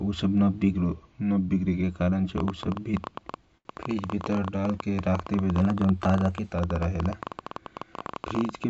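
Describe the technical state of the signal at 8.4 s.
At 8.4 s the speech is overlaid by a rapid, uneven ticking, roughly fifteen sharp pops per second that poke up to about 10 dB above the speech. This is a train of clicks, running from 2.38 s to the end of the clip and continuing through the pauses. Its likely cause is an outside source, such as nearby interfering equipment or a faulty connection or power supply, repeatedly injecting near-identical pulses at an irregular pace. The clicks ride over band-limited call audio that carries nothing above 8 kHz, consistent with G.722 coding.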